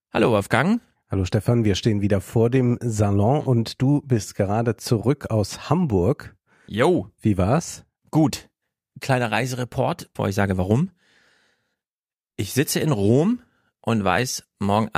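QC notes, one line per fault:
No faults detected.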